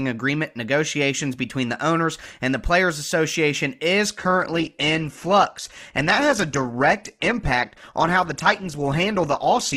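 At 4.09 s the speech drops abruptly to a lower-quality version and stays there to the end, the signature of an adaptive stream at a lower bitrate: the player switched to a cheaper encoding when the connection slowed, with no gap at the changeover. Nothing above about 12.2 kHz remains, so the treble dulls, and codec artefacts rise. The step is consistent with a move from around 64 kbit/s Opus down to roughly 12 kbit/s.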